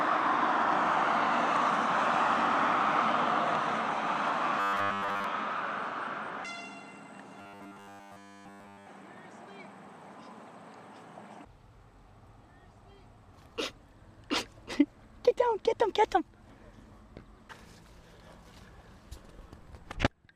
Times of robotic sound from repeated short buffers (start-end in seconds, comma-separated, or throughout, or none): 4.60-5.24, 7.39-8.86